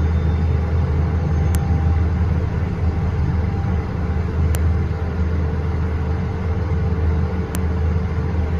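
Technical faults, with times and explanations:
1.55 s, 4.55 s and 7.55 s: file header played as audio. Separate pieces of audio, each 3 s long, were joined end to end without stripping their file headers, so the few dozen header bytes at each join were read as sample values. Those values bear no relation to the surrounding waveform, so each join produces a sharp, loud click lasting about a millisecond, landing every 3 s regardless of what the audio is doing.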